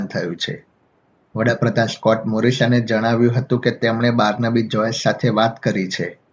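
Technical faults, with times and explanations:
No technical faults detected.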